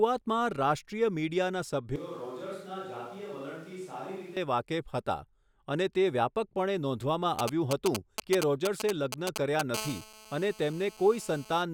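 From 1.96 s to 4.37 s, the speech turns roomy and hollow. Bass thins and the level falls by roughly 10 dB. Room noise rises to around 25 dB below the speech. The change is abrupt both ways. This is likely a switch to a distant microphone.

GSM signalling bursts follow from 7.39 s to 9.61 s. A nearby 2G phone is signalling. The audio circuit rectifies its radio bursts. They come through as galloping groups of short 217 Hz buzzes, nearly as loud as the speech.

From 9.74 s to 11.63 s, a GSM phone buzz runs steadily. The phone is now in a call, transmitting 217 bursts per second. Rectified, this gives a hard, raspy 217 Hz buzz full of harmonics. It sits about 15 dB below the speech.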